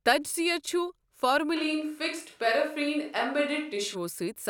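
From 1.57 to 3.93 s the speech turns abruptly roomy, hollow and thin, likely a switch to a distant microphone. The spectrogram shows weaker lows, smeared decay tails, and little level change.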